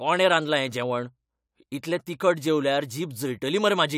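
No technical faults can be heard anywhere in the speech; the signal stays steady and intact throughout.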